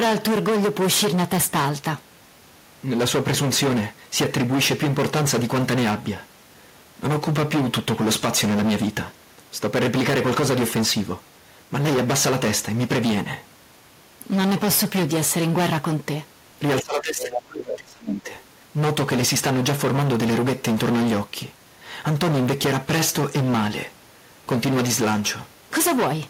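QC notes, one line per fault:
Throughout: hard clipping. The speech is driven about 19 dB past what the stage can pass, so something like a third of the samples get their peaks sheared flat. Those squared-off tops spray harmonics high up, which is why every loud syllable carries a harsh fuzz.
16.8–18.34 s: speech suppressed in double talk. The voice sinks by around 30 dB, fading and breaking up over roughly a second and a half. That pattern points to an echo canceller that likely heard the far side talking at once, couldn't separate the two, and turned everything down.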